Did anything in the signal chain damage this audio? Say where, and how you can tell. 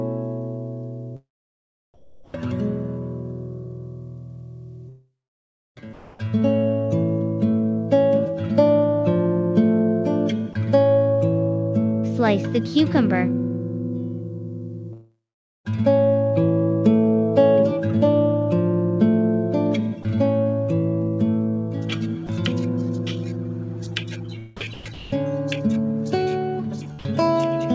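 Yes. Call processing: from 1.94 to 2.34 s and 3.64 to 6.19 s, comfort noise in place of the background. It's a flat, featureless hiss, about 9 dB quieter at first, likely from discontinuous transmission.

Network: long network dropouts at 4.89 to 5.82 s and 14.93 to 15.67 s, likely because no audio arrived for those stretches. The sound smears into a fading buzz, then goes near-silent for roughly half a second before resuming further on.

Voice detector: sound dropped by the voice detector at 10.53 s, 22.27 s and 26.99 to 27.05 s. Brief bits vanish into steady noise, likely where the detector misjudged them as background.

Same detector: sound chopped by the voice detector from 24.57 to 25.12 s. Its likely repeated on/off switching makes the audio choppy.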